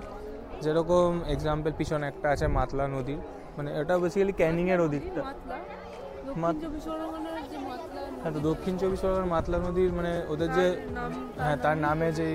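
At 2.14 s and again at 10.17 s, overlapping chunks cause a brief stutter: each new 4-second chunk begins about 13 ms before the previous one ends, so that sliver of audio plays twice at the join, heard as a small click-like repeat.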